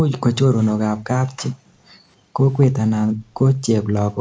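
Speech recorded through call microphone processing, with nothing above 8 kHz. The background is gated by the echo canceller at 1.52–2.36 s, 3.05–3.46 s and 3.82 s to the end, as it clamps the microphone while the loudspeaker plays. Room noise drops by about 37, 29 and 40 dB, showing as dark, abruptly emptied spectrogram bands and flattened waveform floor.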